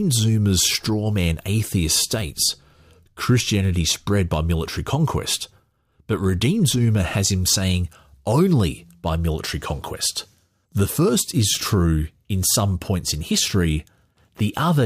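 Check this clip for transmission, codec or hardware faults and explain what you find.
I checked this clip and found no faults to explain.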